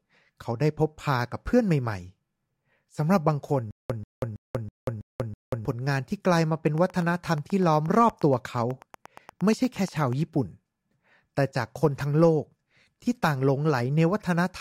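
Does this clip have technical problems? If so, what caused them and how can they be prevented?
Yes. From 3.71 to 5.65 s there's a stutter with silent gaps: a 137 ms burst repeats six times, each followed by 188 ms of digital silence, about every 325 ms. It's likely a stalled stream replaying its last fragment, and the speech meant for that stretch is gone. A larger playback buffer and a steadier connection would prevent it.

Then from 6.67 to 10.14 s there's a train of clicks, about 30 regular ticks at roughly 8.4 per second, about as loud as the speech and audible in pauses too. The likely culprit is electrical interference or a faulty connection or power supply. Keeping gear away from noisy equipment and checking cables and drivers should stop it.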